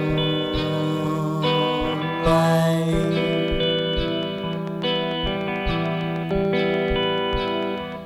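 A train of clicks runs from 2.30 to 7.93 s, likely from interference: about forty regular pops at 6.75 per second, ticking about 5 dB above the music.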